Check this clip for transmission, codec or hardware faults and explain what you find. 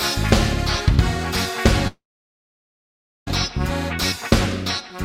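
A long network dropout runs from 1.87 s to 3.29 s. The stream was likely interrupted, so about 1.4 s of audio never arrived, and the receiver filled the gap itself. It stretches the last sound into a short fading buzz lasting roughly a tenth of a second, then leaves about 1.27 s of silence. At 3.29 s the audio resumes further along, with the missing section simply gone and no attempt to recover it.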